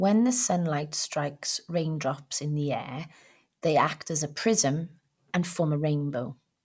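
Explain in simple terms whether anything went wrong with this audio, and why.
Nothing went wrong with this recording. No technical fault of any kind turns up anywhere in the speech.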